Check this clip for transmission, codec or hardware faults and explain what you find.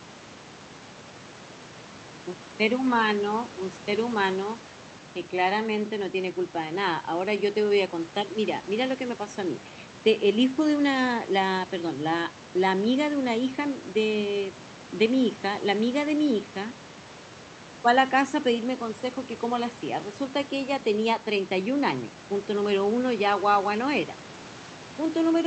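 No faults are audible: the speech arrives through an Opus call path at 40 kbps with audio extending to 8 kHz, and the room noise about 20 dB below the speech belongs to the recording space, not the system.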